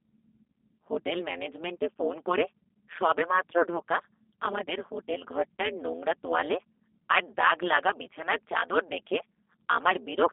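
From start to finish, overlap-add ripple chops the level up and down by about 60 dB around 150 times a second. The frames were windowed and rejoined with overlaps that don't sum evenly. Unlike a slow tremolo, this flutter is fast enough to sound like a harsh, buzzy robotic roughness.

Also throughout, the G.729 codec's damage is plainly audible. The speech is confined to roughly 200 Hz to 3.6 kHz, with nothing above 3.7 kHz, which fits an 8 kbit/s coder rebuilding speech from a filter, pitch predictor and sparse pulses. Unlike a plain low-pass, it adds a synthetic, gritty texture.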